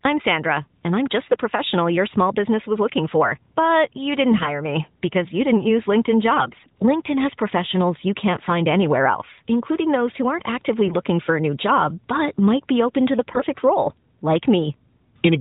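AMR bit errors crop up at 1.26 to 1.42, 4.32 to 4.49, 6.34 to 6.72, 8.37 to 8.51 and 13.30 to 13.45 s. Flipped minor codec bits keep pitch and level but make the speech briefly hoarse and gargly.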